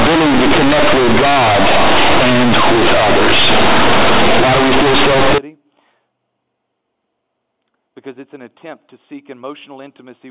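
Companded audio read as linear, from 0.0 to 5.38 s: the mu-law bytes are played as plain 8-bit samples without expansion. Quiet speech then swings nearly as wide as loud speech, so it sounds harsh and buzzy, with heavy noise filling the pauses. After that, normal G.711 telephone sound returns.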